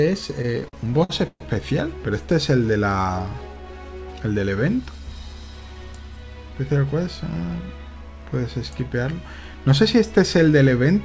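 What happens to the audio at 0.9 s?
Repeated stalls (stutter) run from 0.42 to 1.42 s, so 0.9 s falls in the middle of them. Packets were arriving late or more slowly than they were played, and the jitter buffer kept running dry. Each time, the receiver stretched the last bit of sound to cover the wait, fading it during the longer holds. Twelve such stalls add about 324 ms of filler, roughly a third of that second, with the longest lasting 130 ms. Nothing is lost, but the sound drags and stutters. The stretched sound has the dull top of the G.722 call path, with nothing above 8 kHz.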